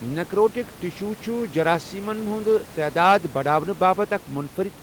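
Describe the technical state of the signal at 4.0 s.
At 4.0 s the speech signal is intact, with only the room's own background noise sitting about 24 dB below the voice.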